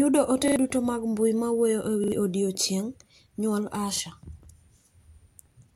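Repeated buffer at 0.48, 2.04 and 3.96 s in this speech: a short slice replays with hard joins, a stutter fitting a 40 ms buffer re-played when fresh audio arrived late.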